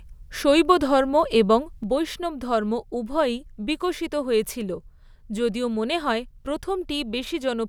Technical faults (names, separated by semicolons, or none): sudden gain jump